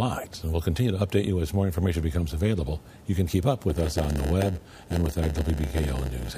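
From 3.68 s to the end of the clip, the audio shows a block size mismatch (padded). Each block one stage hands on is shorter than the block the next stage expects, and the missing part is filled with silence. This adds a brief gap to every block. The gaps produce a buzz at about 92 Hz and slow the audio to 0.919 of its speed while the pitch stays roughly the same. On a waveform the signal is cut by evenly spaced flat dropouts. On a spectrogram the same section shows thin vertical stripes repeating about every 11 ms.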